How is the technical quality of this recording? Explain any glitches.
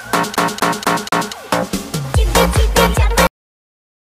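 Two glitches stand out, one near the start and one at the end.

From 0.36 to 1.33 s there's a CD stuck on one turn: the laser keeps jumping back, replaying the same 0.24 s chunk four times with tiny mutes, a tight, even stutter.

Then a cut-off end at 3.27 s: the final buffers never got written, so the sound stops mid-sound and drops straight to dead digital silence.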